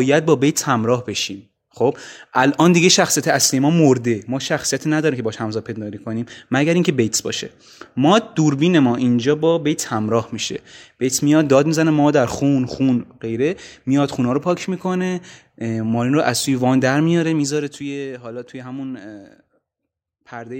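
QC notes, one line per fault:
17.14–17.99 s, zipper noise: a level cut of roughly 10 dB was applied in coarse steps with no smoothing between them, at something like 300 steps a second. Each jump in gain puts a small discontinuity into the waveform, which is heard as a click. Packed that densely, the clicks merge into a ticking, zipping buzz that rides on the speech for the whole of the fade and stops once the level settles.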